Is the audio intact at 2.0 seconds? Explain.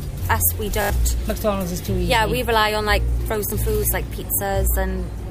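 Yes, the audio is intact at 2.0 seconds, with no dropout, click, distortion or other fault at that moment.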